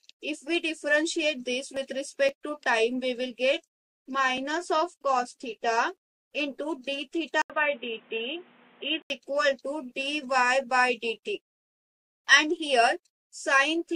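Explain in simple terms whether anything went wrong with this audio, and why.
Between 7.42 and 9.10 seconds, the recording most likely had its input switched to a poorer device, such as a different microphone or a headset in call mode. That device picks up nothing above about 3.8 kHz, so for those moments the sound turns dull and boxy, and a faint new background hiss comes in underneath. The loudness stays about the same. There is a brief gap of about 80 milliseconds at the switch.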